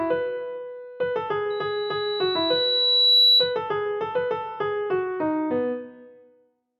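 From 1.50 s to 3.59 s a thin, piercing tone at 3.9 kHz rises out of the audio, swelling over about a second and a half until it sits roughly 10 dB above everything else, then stops. This is loudspeaker feedback squeal: the microphone was picking up the loudspeaker it was driving, and at 3.9 kHz the loop gain went above one, so that frequency kept reinforcing itself until the loop was broken.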